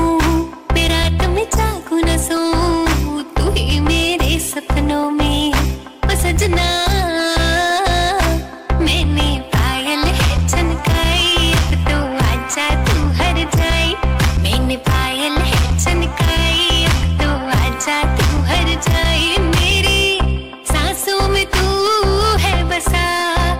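Hard clipping runs throughout: peaks driven about 9 dB past the ceiling are sliced flat, roughly a sixth of the waveform, giving harsh fuzz rather than soft saturation's rounded warmth.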